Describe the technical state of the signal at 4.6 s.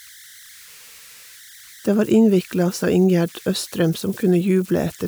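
At 4.6 s the signal carries converter idle tones, present throughout the clip at about 26 dB below the speech. An undithered delta-sigma converter settles into repeating bit patterns on small inputs, and here those patterns produce a tone around 2 kHz with grainy noise beneath the quieter sound. Unlike steady interference such as hum or a fixed whine, this tone depends on the input's offset, so its pitch is tied to that offset.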